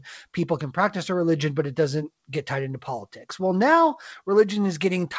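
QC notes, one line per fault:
Throughout: clock drift between sender and receiver. The far end's clock is running slow, something like four percent behind the receiver, so the jitter buffer keeps draining faster than it refills. The receiver has to keep padding the audio out to stay in step, and you hear that as small, unevenly spaced timing hiccups spread over the whole clip rather than one obvious glitch. The G.722 path underneath, with nothing above 8 kHz, fits a 64 kbps call.
0.28 to 4.85 s: repeated timing corrections. Across this stretch the receiver keeps stretching short pieces to cover the slow sender, all in the same direction, effectively playing the speech at 96% speed. Each edit is tiny, but together they add roughly a fifth of a second. If anything, it comes across as a faintly unsteady, slightly dragging tempo with the odd soft stutter, irregularly spaced because each correction only kicks in when the buffer runs low.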